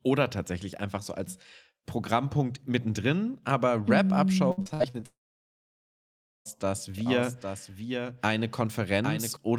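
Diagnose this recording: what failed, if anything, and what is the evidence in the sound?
Network transport failed between 4.51 and 5.04 s with repeated packet loss, giving a robotic sound. Audio went missing again and again, the longest hole lasting 61 ms. The receiver patched each hole by extending the last sound, so close to half of that stretch is synthetic and choppy, with pieces missing.

From 5.06 to 6.47 s a long network dropout is the likely cause. Almost nothing arrived for about 1.4 s. The receiver briefly continued the last sound as a fading buzz or hiss, then left about 1.33 s of silence. The audio returns afterwards without the lost portion.

Between 6.94 and 9.36 s there is a doubled audio track, likely from a second capture path or an edit holding two copies. A full-band copy runs about 0.7 s behind the original, roughly 5 dB quieter, with no room colour. It switches in and out abruptly.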